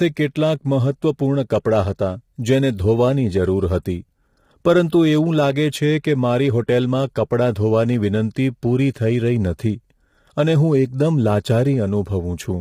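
Low-delay AAC compression runs throughout the speech, likely from AAC-ELD. Its short frames resolve pitch harmonics poorly, so the voice sounds rough and grainy, with noise filling the gaps between harmonics and a synthetic-sounding top band, heavy damage that fits a bitrate around 24 kbps.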